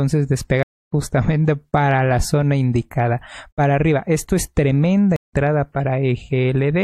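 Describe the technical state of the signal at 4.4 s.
The signal at 4.4 s is intact, with no audible fault at that moment.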